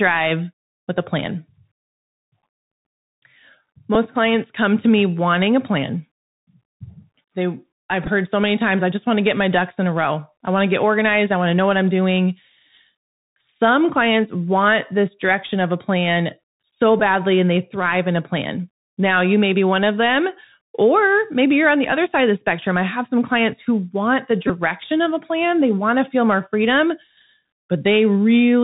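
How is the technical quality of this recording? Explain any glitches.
The whole speech recording is muffled and narrowband, with brief buzzy glitches at four points.

Bluetooth CVSD headset codec: throughout, the sound is dull and stops near 4 kHz, with a grainy hiss underneath, scratchy s sounds, and roughness on loud bright moments. That fits 64 kbps CVSD, which sends one up-or-down bit per sample with an adapting step that can't keep up with fast, loud high content.

Bluetooth headset packet repeated: at 3.95 s there is a very short buzz, where about 7.5 ms of audio was replaced, which fits two lost packets. From 8.04 to 8.08 s brief buzzy repeats appear, with 15 ms of losses scattered over 30 ms and the longest run roughly 7 ms. From 17.00 to 17.02 s a short buzz covers 15 ms of lost audio. From 24.48 to 24.50 s a slightly longer buzz covers 18.8 ms. In each case the headset chip decoded the previous packet's bits again in place of missing ones, and a run of repeats every 3.75 ms produces a brief tone near 267 Hz.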